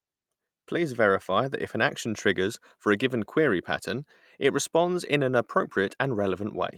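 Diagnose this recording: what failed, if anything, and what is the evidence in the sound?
Nothing stood out on listening to this speech recording that would point to a failure at any stage of the chain.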